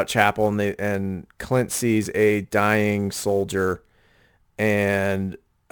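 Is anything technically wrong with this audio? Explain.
Yes. Sample clock jitter runs throughout: timing wobble of roughly 10 microseconds smears fast slopes, leaving a gritty hiss about 25 dB down that swells on loud, bright speech.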